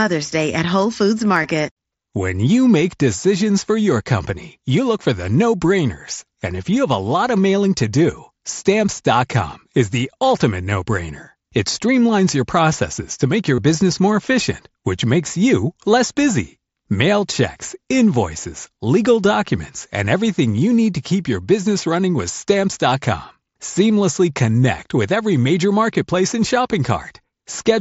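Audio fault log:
1.43 s and 13.55–13.58 s, concealed Bluetooth headset packet loss: the first gap, about 15 ms, is brief. The second, about 30 ms between "processes to make your" and "business more efficient which", gives a short buzzy held tone and a slight warble as real sound resumes. Lost headset packets were filled by repeating the best-matching piece of the preceding waveform, which fits two and then four consecutive lost packets.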